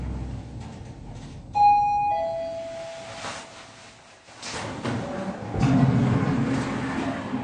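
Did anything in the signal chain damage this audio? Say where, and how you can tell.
Yes. AAC compression runs throughout, with plainly audible damage at the codec stage: nothing sounds above 9.8 kHz, and the top end is dull and smeared with a warbling texture. The cause is likely AAC-LC quantisation at a bitrate that fits about 32 kbps.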